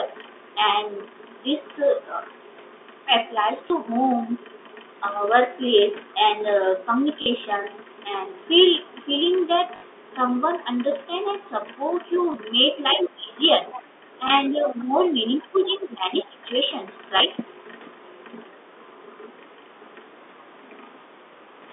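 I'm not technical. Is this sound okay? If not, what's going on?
No, there are a few glitches.

First, packet loss with last packet repeated: at 3.68, 7.22, 9.76, 12.32, 14.28 and 17.18 s, bits of the call went missing and the receiver filled each gap by replaying the last tiny slice. You hear a brief robotic stutter or buzzy click, longest at 9.76 s.

Second, the other side's voice leaking through: around 12.9 to 13.2, 13.7 to 13.8, 15.6 to 15.7 and 16.2 s, a second voice sneaks in, fairly noticeable at first and very faint by 15.6 s. This is likely the far end's loudspeaker sound that the echo canceller didn't fully remove.

Third, speech suppressed in double talk: from about 12.96 to 13.37, 13.74 to 14.93 and 15.43 to 16.4 s, the talker's voice dips and gets patchy, most sharply in that last stretch. Both sides were likely talking at once, so the call's processing turned everything down.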